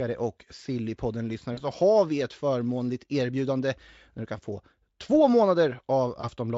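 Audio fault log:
1.53 to 1.63 s and 6.21 to 6.29 s, VoIP packet loss concealed by the speech codec: the speech briefly smears into a stretched, fading sound, then sounds thin and distorted for a moment before "har vi ett förmånligt" in the first case and near the end in the second. About 40 ms of audio went missing in the first gap and 20 ms in the second, which fits two lost 20 ms frames and then one. The Speex decoder filled each gap by repeating its last pitch and filter at falling gain. Because each frame builds on the one before, the damage lasts past the gap itself.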